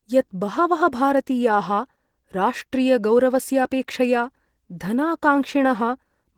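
From start to finish the speech carries plainly audible Opus compression damage, most likely from an encode at a low rate around 16 kbps. The top end still reaches up to about 20.2 kHz, but that's the hybrid mode at work: a speech-style coder handles the lower band while the upper band is rebuilt from folded or noise-filled energy. So you get a hoarse, muffled core with a grainy, rough sheen riding over the highs.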